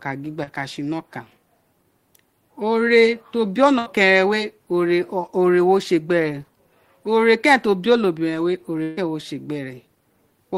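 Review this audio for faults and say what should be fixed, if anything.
Right near the start, from 0.43 to 0.49 s, there's a short concealed packet loss. About 40 ms of the speech never arrived in time, so the receiver patched roughly 32 ms of it by extending the sound just before the hole and then blending back into the real audio. You hear it as a quick smear or wobble. A bit more jitter-buffer headroom or forward error correction on the link would keep gaps this small from reaching the listener.

The bigger issue is two bursts of packet loss. The first runs from 3.79 to 3.88 s, where about 80 ms went missing and around 73 ms was filled in. The second, from 8.83 to 8.99 s, is worse: about 140 ms lost, with roughly 138 ms of fill and no silent gap. In both places the decoder keeps the last sound going and lets it fade, then jumps ahead, so whatever fell in between is lost. To prevent this, fix the network path or add redundancy so that several consecutive packets can't drop together.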